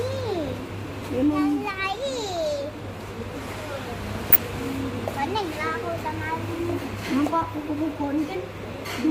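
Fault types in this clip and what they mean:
DAB burbling: weak reception lets bit errors slip past the error correction into the MP2 data, so single sub-bands jump in level for up to a frame. Here you get four short bursts, at 0.47, 2.29, 4.30 and 8.57 s, the last one longest.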